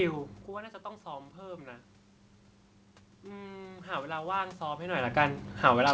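From 3.24 to 5.08 s, automatic gain rising: the input drops about 13 dB, and the gain control slowly adds about 4 dB, swelling voice and room noise together.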